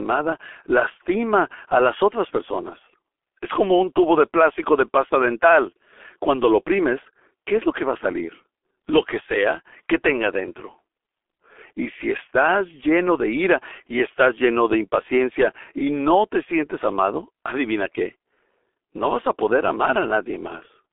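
From start to finish the speech passes through a G.723.1 codec, damaged heavily enough to fit its 6.3 kbit/s mode. It coarsely rebuilds the voice in 30 ms frames, so it sounds muffled and hoarse and consonants smear together. A spectrogram shows energy confined to a 300 to 3500 Hz telephone band, nothing above 3.8 kHz and nothing below 300 Hz, with blocky, frame-stepped formant tracks instead of smooth contours.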